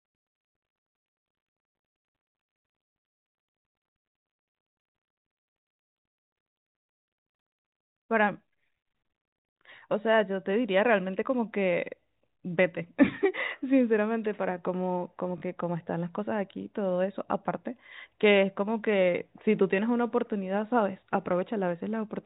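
Speech over a G.711 telephone path, band-limited below 4 kHz, with packet loss with last packet repeated from 15.38 to 15.42 s: a 40 ms robotic stutter, consistent with two 20 ms packets replayed. The waveform shows a repeated block with discontinuities at each join.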